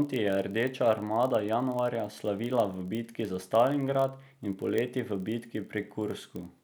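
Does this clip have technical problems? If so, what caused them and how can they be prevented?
Yes. There's a block size mismatch (padded) running the whole way through this speech clip. You can hear a steady buzz at about 43.1 Hz, which is the block rate. One stage is handing over blocks a touch shorter than the next stage reads, and the shortfall gets filled with zeros. That puts a tiny gap in every block, which fits a 1024-sample read. The speed only drops to 0.999x, so pitch and timing sound basically normal. Making sure both stages agree on block size prevents it.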